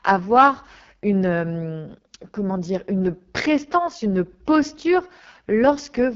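AMR wideband (HD Voice) codec damage runs through the whole speech clip. The heavy roughness and rasp point to its lowest mode, around 6.6 kbit/s, where too few pulses describe the voice. The band stops near 7.4 kHz, and its top is filled with noise.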